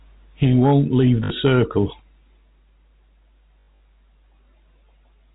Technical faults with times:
1.24-1.30 packet loss with last packet repeated
3.60-3.80 packet loss with last packet repeated

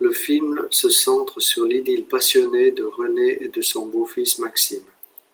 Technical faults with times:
none

